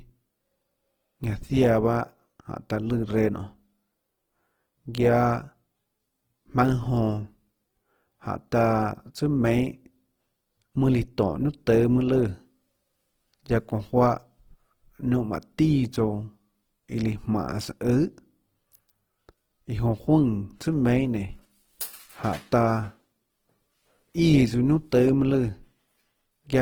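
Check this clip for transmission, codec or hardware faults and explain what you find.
One codec fault runs through the whole clip. Throughout, the speech sounds rough and grainy, yet extends to 20.2 kHz: likely Opus compression, filling bit-starved bands with noise, consistent with 16 kbps.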